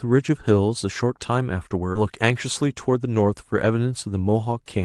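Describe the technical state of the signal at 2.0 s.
Right around there, at 1.95 to 1.97 s, there's a skip ahead. A chunk of the speech, something like 0.7 s of it, got dropped while later audio was already queued, probably discarded when the jitter buffer overflowed. Playback just leaps forward with no filler and no real gap, so the audio on either side is butted together. You hear an abrupt splice where part of the talking simply vanishes, carried through the call codec's band-limited sound.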